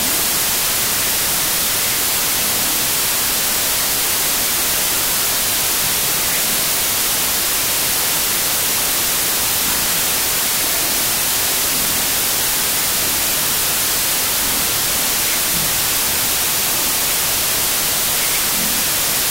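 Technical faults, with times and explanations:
Throughout, wrong sample width: loud hiss buries the speech, which plays at half speed and an octave low. This fits 32-bit samples read as 16-bit pairs, each low half turning into noise. The waveform is a dense noise block, and the spectrogram shows broadband haze over faint, lowered harmonics.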